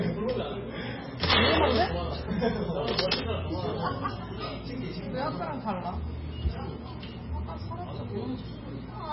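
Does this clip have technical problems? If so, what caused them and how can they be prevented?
Yes. Throughout the clip the audio has a hard ceiling: nothing is present above 5.5 kHz, and what remains sounds watery and swirly, with smeared attacks and metallic chirps on bright transients. This is likely heavy MP3 compression, where the encoder was short of bits, cut the treble at a fixed frequency and let weak frequency lines flicker on and off between frames, which fits a very low bitrate around 16 kbps. Encoding at a higher bitrate, or using a modern codec such as Opus, prevents it.

There is also integer overflow, heard as violent cracks from 1.31 to 1.41 s and from 2.99 to 3.14 s. In both spans the level was driven about 6 dB past the integer limit, so the peaks wrapped around to the opposite sign and jumped across the full range instead of being limited. That produces a sharper, harsher break than ordinary clipping. 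Using saturating arithmetic or a limiter before conversion to integer samples prevents it.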